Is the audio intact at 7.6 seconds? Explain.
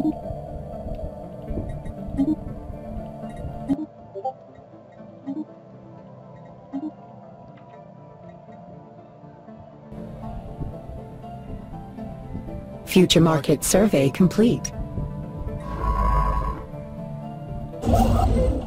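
No. From 3.73 to 9.92 s the sound loses everything above 7.6 kHz, drops noticeably in level and gains a faint new noise floor, with no gap at either switch. Likely an input switched to a poorer device. Unlike a simple filter, the tone, level and noise all change together.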